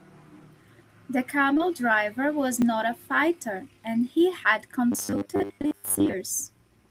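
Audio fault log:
1.53–1.61 s, short concealed packet loss: two back-to-back gaps of about 20 ms each were filled by extending the preceding sound, giving a brief smeared wobble.
2.62–2.64 s, repeated buffer: one 20 ms block plays twice with a hard join, heard as a quick stutter, with no audio skipped.
4.92–6.14 s, robotic sound from repeated short buffers: most of this stretch is rigid and metallic, with a fixed 100 Hz buzz following the speech loosely, likely from 10 ms buffers being repeated while new audio is skipped.
5.61–5.66 s, short concealed packet loss: a further gap of about 20 ms, filled from the preceding sound, adds a brief smear inside the buzzing stretch.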